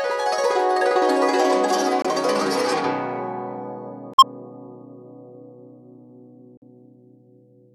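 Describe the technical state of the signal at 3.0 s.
At 3.0 s the music plays through intact, with no audible fault at that moment.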